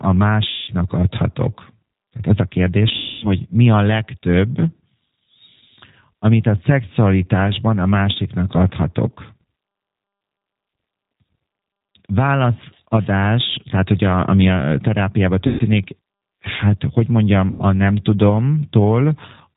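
G.729 codec, throughout the clip: this 8 kbit/s speech coder rebuilds the voice from a filter, a pitch predictor and sparse pulses. It cuts everything above 4 kHz and leaves the speech plainly rough and synthetic.

VoIP packet loss concealed by the speech codec, at 0.48–0.72 s, 2.96–3.31 s, 15.47–15.64 s and 17.51–17.63 s: the decoder extends its last pitch and filter into a fading buzzy tone or coloured noise, covering about 200, 260, 120 and 90 ms of lost audio. The voice stays weak briefly after each gap.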